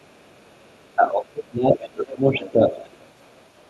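Speech, heard over a call path with Opus coding, carries the other side's voice leaking through, likely residual echo that the echo canceller failed to remove from the loudspeaker pickup. It sits faintly under the talker from 0.00 to 0.96 s (very quiet, around 40 dB down), swells to nearly the talker's own level from 1.70 to 2.15 s, then returns from 2.40 to 2.51 s and from 2.71 s to the end at roughly 20 to 25 dB down. Unlike crosstalk or a second person in the room, it is a distinct, separate voice that comes and goes, tracking the far end's talking. Speech suppressed in double talk shows up from 0.97 to 2.31 s, with the talker's level pumping down by as much as about 20 dB over roughly a second in total, and again from 2.53 to 2.73 s, dipping about 10 dB. This is likely the canceller clamping down while both sides talked at once. The dips cluster around the leaked voice, which separates them from network dropouts or gain-control pumping.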